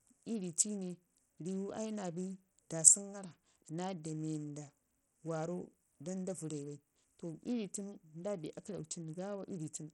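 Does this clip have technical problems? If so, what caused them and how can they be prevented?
Yes. Throughout the speech the treble sounds thin and unsteady, with upper detail flickering in and out, a gritty grain riding on the voice, and nothing at all above 16.5 kHz. This is likely Bluetooth SBC compression under heavy strain: the codec splits the signal into a few broad bands and, at what sounds like a low bitrate around 64 kbps, starves the weak top bands of bits while coarsely quantising the rest. Recording through a wired connection, or a Bluetooth link running a higher-quality codec or bitpool, would prevent it.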